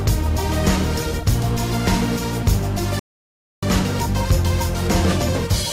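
A rebuffering stall runs from 2.99 to 3.63 s. The player drained its downloaded audio and had to wait for more, so the sound drops to silence for about 0.63 s, then picks up exactly where it halted, with nothing skipped and only time added.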